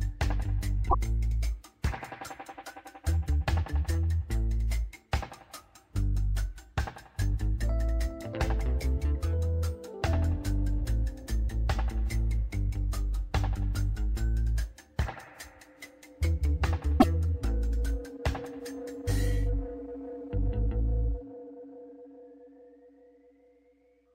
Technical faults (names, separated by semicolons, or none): broken MP3 bit reservoir